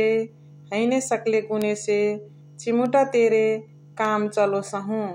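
At 1.62 s, 2.86 s and 4.05 s the speech carries a bit error spike, where a flipped bit throws one to three samples off by a power of two before they snap back. The first, a single sample near about -4 dBFS, is loudest; the others, three samples each, peak near about -22 and -16 dBFS. Each is a bare broadband tick with no gap or decay, unlike a dropout click, and it ignores what the signal is doing.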